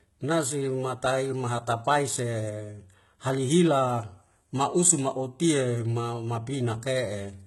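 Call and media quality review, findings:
Speech, whole clip. Treble gritty and metallic, s sounds lispy. Nothing above 11.8 kHz. Likely HE-AAC compression, heavy damage, which fits a 16 kbps stream. Upper band rebuilt from copied lower bands. Harmonics misaligned across the crossover.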